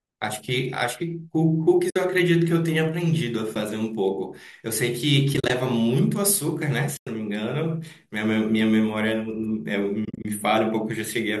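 Speech with AAC frame loss with muting: dropped frames, likely from a low-delay AAC stream, are zeroed by the decoder, leaving soft-faded gaps at 1.90–1.96 s, 3.55 s, 5.34–5.50 s (scattered), 6.97–7.07 s and 10.05–10.25 s (scattered).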